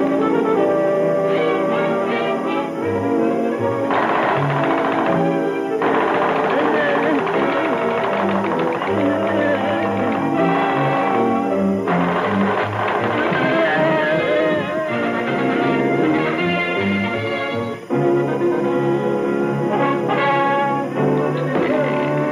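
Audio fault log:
Throughout: timecode bleed. A steady chirping warble sits about 30 dB beneath the sound. Linear timecode at 25 frames per second has leaked in from a nearby track or cable. Its square wave flips between tones near 1 and 2 kHz.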